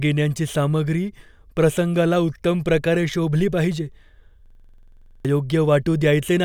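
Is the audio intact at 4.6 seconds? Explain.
No. Just after "उत्तम प्रकारे शोभली पाहिजे", a system hang loop runs from 4.46 to 5.25 s. The system stalled while the hardware replayed one 46 ms chunk, which fits a 2048-sample buffer, as a rapid 21.5 Hz stutter. The waveform shows identical repeating blocks, the spectrogram evenly spaced vertical stripes, and about 0.7 s of audio is lost.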